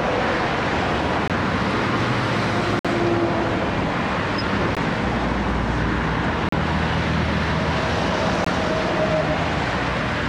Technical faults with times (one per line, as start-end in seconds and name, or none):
1.28-1.30 Bluetooth stall
2.79-2.85 Bluetooth stall
4.75 Bluetooth stall
6.49-6.53 Bluetooth stall
8.44 Bluetooth stall